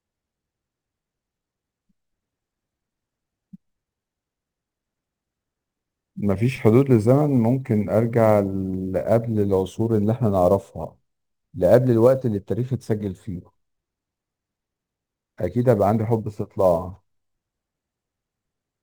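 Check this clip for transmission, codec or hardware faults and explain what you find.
One hardware fault runs through the whole speech clip: sample clock jitter. The converter's clock wanders, so each sample is taken slightly early or late, and the resulting error scales with how steeply the waveform is changing. It shows up as a grainy hiss riding on loud, bright syllables, roughly 35 dB below the signal, which fits jitter of several microseconds. Unlike a steady noise floor, it disappears completely in the pauses.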